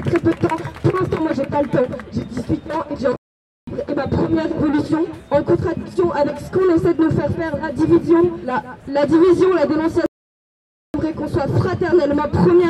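At 3.16 s the sound stops dead in mid-flow and stays silent for about 0.51 s, resuming at 3.67 s. A longer gap follows at 10.06 s, with nothing heard for about 0.88 s until 10.94 s. Both are playback stalls: the player likely ran short of data or had its thread held up, so the output went quiet until it caught up and carried on.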